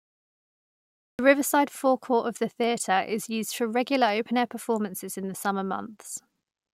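Speech opens on dead digital silence for the first 1.19 s, and then the audio snaps in mid-sound at 1.19 s with no attack or fade-in, as though the start of the phrase had been sliced off. This is a cut-off start: capture or streaming only began once the talker was already partway through a sound, so everything before that point is missing and the first audible sound arrives truncated rather than building naturally.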